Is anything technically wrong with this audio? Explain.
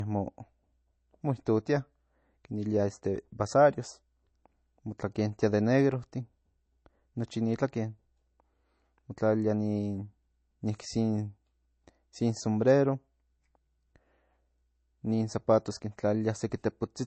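Yes. Low-bitrate audio saved at a high bitrate runs through the whole speech clip: nothing is present above about 8.3 kHz. This likely comes from an MP3 encoded at a low rate, around 32 kbit/s, and later re-saved at a much higher one. The second encoding cannot restore the removed treble, so the speech sounds dull and band-limited despite the large file.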